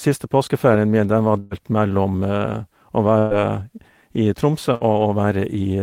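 After "påskeferien min den var", a burst of packet loss strikes at 1.39 s. Two more follow, at 3.19 s and 4.75 s. Each gap is filled by carrying on the last sound and fading it down. Speech resumes with about 120, 120 and 60 ms lost.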